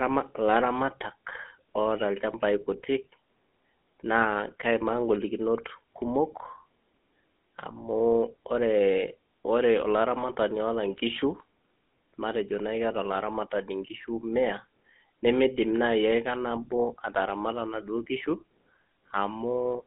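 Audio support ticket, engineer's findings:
Speech path encoded through GSM full-rate codec, whole clip; sound fits the 13 kbps full-rate coder. Vocal-tract model driven by sparse regular pulse excitation, so buzzy, gravelly roughness is plainly audible. Line band about 200 Hz to 3.7 kHz, nothing above 3.8 kHz. Dull, narrowband telephone quality.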